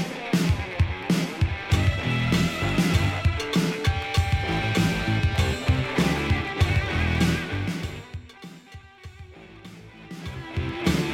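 No technical faults can be heard anywhere in the clip. The smooth level changes come through as gradual, fader-like shifts in loudness that work as intended.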